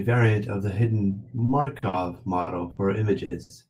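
Right after "variant of a hidden", from 1.45 to 2.80 s, the speech breaks up with repeated packet loss, giving a robotic, choppy sound. Seven separate gaps are patched by extending the preceding sound, about 310 ms in total and roughly a quarter of that stretch. The longest gap is 60 ms, and about 120 ms of speech never arrives.

At 3.25 to 3.34 s a burst of packet loss hits. The receiver carries the last sound forward for about 60 ms while fading it, heard as a held buzz or decaying hiss, and playback resumes 60 ms further on with that portion gone.

From 3.43 to 3.53 s comes a short stall from a late packet. The jitter buffer empties, so the current sound is stretched for about 70 ms until the delayed packet lands, then continues from the same point. Nothing is lost, but the held sound drags audibly.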